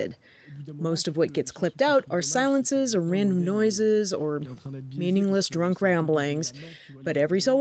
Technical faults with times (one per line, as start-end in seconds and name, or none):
none